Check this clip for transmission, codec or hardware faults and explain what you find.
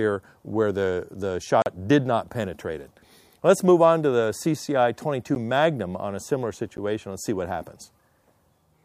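The clip has one kind of fault, a block of digital silence, occurring three times. At 1.62 to 1.66 s the sound drops out for 40 ms, a short hole. At 5.35 s and 6.77 s, 10 ms gaps come across as a tick or dip. In each case zeros replaced the audio, cutting out and back without a fade, because output buffers went unfilled or a calculation produced invalid values.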